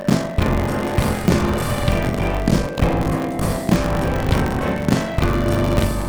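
From the start and all the way through, there's buffer tearing: writer and hardware reader have drifted and cross every period, so roughly half of each buffer replays audio about 40 ms stale. You get a rattly 46.9 Hz buzz under the sound, which fits a 1024-sample buffer.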